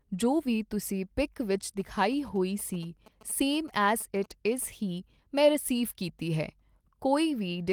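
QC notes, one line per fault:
1.80–4.64 s, GSM signalling bursts: right after "ਵੀ ਤੁਸੀਂ ਪਿੱਕ ਵਿੱਚ" a galloping dit-dit-dit of short buzzes starts up and runs until just before "ਹੀ ਮੈਂ ਰਸੀਵ ਕੀਤੀ". A nearby 2G phone is doing its signalling chatter, and something in the audio chain rectifies those radio bursts. That's why the buzz sits at about 217 Hz. It's quiet, roughly 25 dB under the speech.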